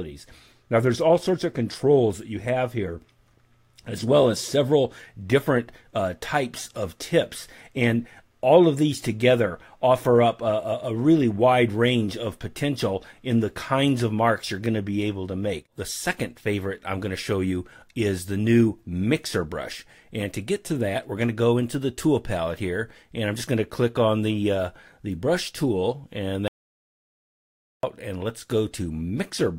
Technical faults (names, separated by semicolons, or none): audio dropout to silence